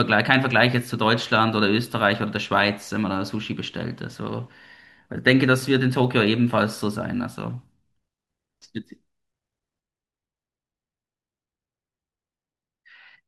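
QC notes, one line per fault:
9.81 to 13.28 s, one channel drops out: the speech falls abruptly by about 6 dB at 9.81 s and stays at that lower level to the end of the clip, with no fade or recovery. The likely cause is the loss of one side of a stereo source before the mono sum. Sound shared by both channels then arrives at half its former contribution, hence the sudden 6 dB step, while anything carried only by the missing side vanishes outright.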